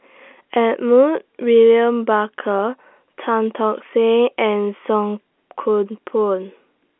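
The speech carries the narrow 250 Hz to 3.4 kHz band of G.711 telephone coding working as expected, with no technical faults to be heard.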